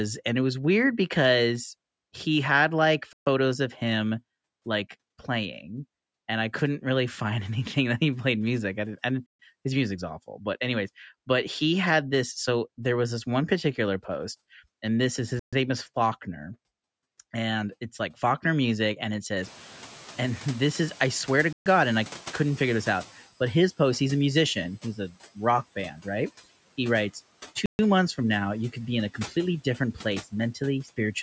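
A speech recording interrupted by a gap between chunks: 132 ms holes of flat silence at 3.13, 9.26, 15.39, 21.53 and 27.66 s, each a hard-edged blank column on a spectrogram. The first falls after "because he had like" and the third after "and this is his". Sound resumes every 6 s of audio, as if each chunk starts late. When the room noise jumps by about 24 dB around 19.5 s, the noise suppressor is catching up from 19.43 to 23.26 s. The broadband noise band starts bright and fades over about 3.7 s as its estimate adapts, ending about 11 dB lower.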